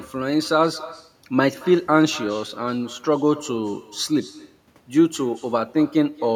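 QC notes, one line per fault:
throughout, echo with no canceller: speech returns about a fifth of a second later, about 21 dB down and thin, shown as a faint delayed copy trailing each waveform burst.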